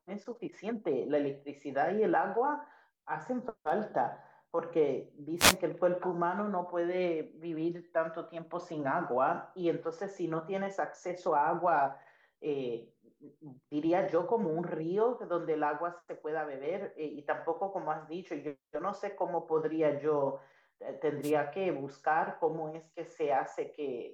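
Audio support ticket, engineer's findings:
Wireless microphone noise hits, two of them. 5.37–5.56 s: quick swish of static washing over the speech, about 0.2 s. 21.22–21.32 s: same thing, shorter, about 0.1 s. Probable component: the analogue FM radio link, microphone to receiver. Mechanism: RF fade, with reflections cancelling the carrier, so receiver noise surges up. Worth a look at antenna placement and receiver diversity.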